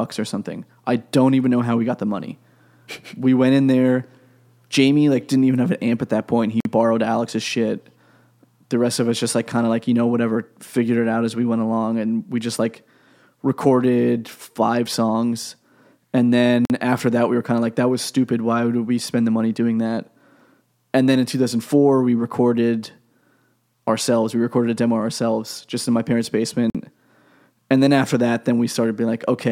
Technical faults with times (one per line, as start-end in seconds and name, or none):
6.60-6.65 gap between chunks
16.65-16.70 gap between chunks
26.70-26.75 gap between chunks